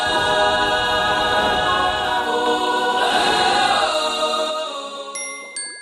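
From 2.46 s to 4.50 s a doubled audio track appears: a second, full-band copy of the sound trails the original by around 150 ms at much the same level, with no decay or room colour, and cuts in and out abruptly. Likely a second capture path or misaligned edit.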